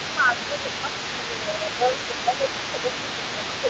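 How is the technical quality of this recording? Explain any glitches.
The recording has two recurring problems: the speech keeps dipping, and a second voice sits underneath it for the whole clip. The sound stops at about 8 kHz, which fits a wideband call codec.

Speech suppressed in double talk occurs from 0.0 to 0.89 s, 1.17 to 1.48 s, and 1.78 s to the end. The level drops by about 5 dB, likely because the echo canceller confused overlapping talk with echo.

The other side's voice leaking through runs throughout at about 10 dB below the speech. It is likely loudspeaker echo that the canceller didn't fully remove.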